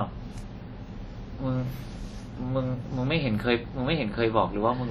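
Across the whole of the speech, heavy WMA compression damage is audible. Transform-block quantisation smears noise over tens of milliseconds, so consonants ring and the background takes on a washy hiss that swells and recedes with the speech. The damage fits a low bitrate around 32 kbps, likely from a WMA encode. On a spectrogram, weak partials drop out into patchy gaps and noise blurs around onsets, while content still extends to about 20.1 kHz.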